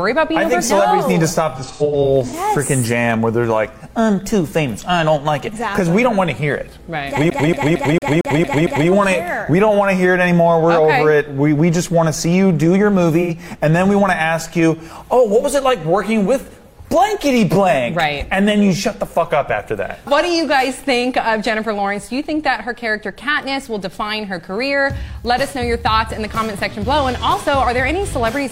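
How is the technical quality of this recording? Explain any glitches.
The recording has two kinds of digital fault: AAC frame dropouts at two points and one stretch of CD skipping.

From 1.55 to 2.34 s, and again at 13.21 to 13.30 s, AAC frame loss with concealment produces smeared, noisy patches. The decoder fills the missing frames from the last good spectrum. In the first event, about 0.34 s is lost, scattered in gaps of up to about a tenth of a second.

From 7.30 to 8.89 s, the CD is stuck on one turn. The same 0.23 s segment repeats seven times, with a short mute at each jump, as the laser falls back one track on every revolution.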